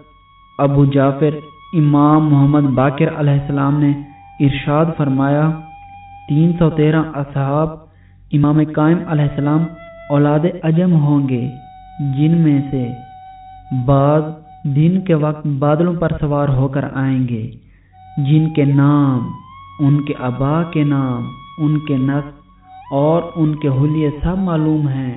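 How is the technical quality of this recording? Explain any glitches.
No glitches can be heard in this recording, which comes through a narrowband telephone-style call path whose content stops at about 4 kHz, consistent with G.711 A-law coding at 64 kbps.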